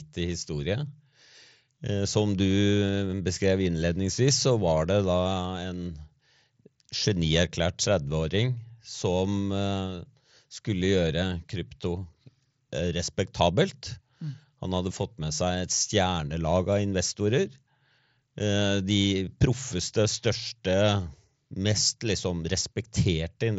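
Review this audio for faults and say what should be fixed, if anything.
Nothing stood out on listening to this speech, so there is nothing here that needs fixing.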